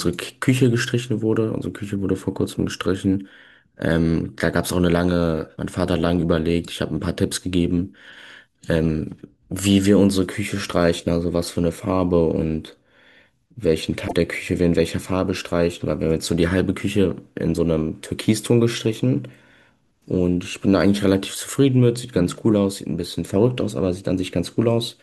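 A brief glitch cuts into the speech from 14.04 to 14.13 s. It is a sign of damaged data in the compressed stream: corrupted bytes there made the decoder misread those frames and lose sync until it found the next valid frame header.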